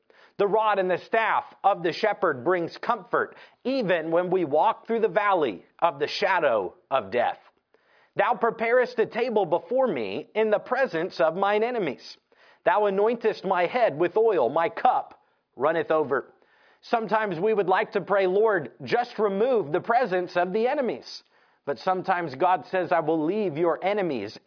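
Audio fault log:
No audible faults detected.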